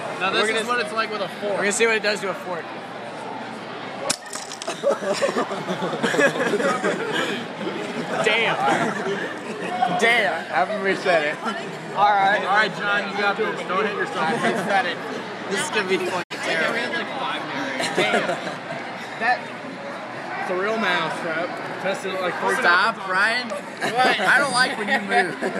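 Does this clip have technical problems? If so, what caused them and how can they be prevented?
Yes. A digital broadcast dropout occurs from 16.22 to 16.32 s. The sound fades out over 20 ms and drops to silence, and 64 ms of programme is lost. This fits two corrupted frames that the receiver muted until clean frames resumed. Stronger, steadier reception and better aerial placement would prevent it.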